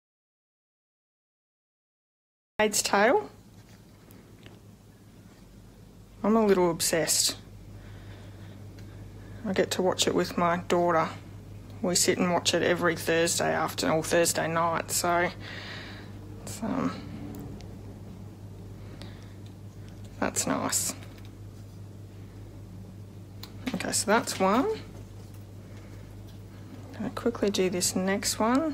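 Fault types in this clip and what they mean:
audio dropout to silence: The clip opens in silence, already under way, until 2.6 s, when the sound cuts in mid-flow. The input was likely lost while silence kept being written. Unlike a quiet pause or gated noise floor, no room tone remains.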